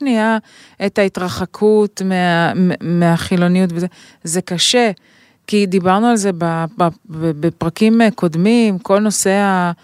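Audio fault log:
Nothing stood out on listening to this speech recording.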